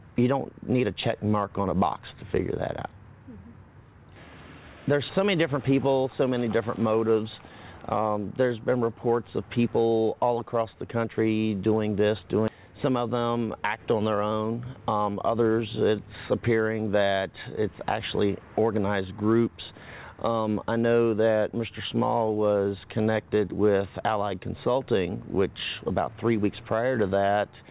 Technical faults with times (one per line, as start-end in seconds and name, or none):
12.48 skip ahead
12.58-13.78 jitter buffer speed-up